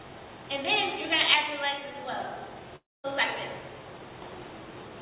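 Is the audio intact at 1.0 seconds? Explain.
Yes, the audio is intact at 1.0 seconds, with no dropout, glitch or other fault at that moment.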